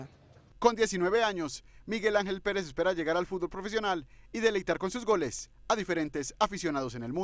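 No technical faults can be heard anywhere in this audio.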